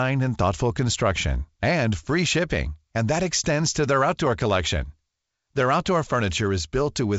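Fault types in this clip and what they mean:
Nothing's wrong with this one: it's ordinary wideband phone audio carried by G.722 at 56 kbit/s, with the usual light coding hiss and nothing above about 7.7 kHz.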